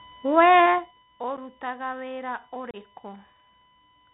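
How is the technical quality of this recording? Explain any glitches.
The technical quality is poor: this speech recording carries a constant electrical tone, the dull, gritty sound of a narrowband headset link, and two audible dropouts.

USB whine runs through the whole clip as a steady 1 kHz tone, sitting roughly 25 dB below the speech. The USB bus pulls current in 1 ms frames, and that periodic load leaks into the audio through shared power or ground, producing a fixed pitch at the frame rate. It sounds like a thin, constant whistle behind the speech. On a spectrogram it shows as a straight horizontal line at 1 kHz from start to end, unaffected by the speech above and below it.

The Bluetooth CVSD headset codec shapes the entire recording, and its damage is plainly audible. CVSD sends a single up-or-down bit per sample with an adaptive step size, which fits a 64 kbps headset voice link. 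Nothing above 4 kHz gets through, so the speech sounds muffled and boxy. Fast, loud movements overrun the step size and distort, sibilants turn scratchy, and a grainy hiss sits underneath. A spectrogram shows a hard ceiling at 4 kHz with empty space above it and a speckled noise floor below.

Unconcealed Bluetooth headset packet loss occurs twice. At 1.37 s a 7.5 ms gap cuts in. From 2.71 to 2.76 s a 30 ms gap follows, which points to about four consecutive lost packets. Each time, voice packets between headset and phone failed to arrive, and silence or an idle pattern filled their place with no attempt to hide the gap. You hear an abrupt hole with sharp edges, and the sound returns slightly quieter. The waveform shows sharply cut gaps, and the spectrogram shows thin vertical blank strips.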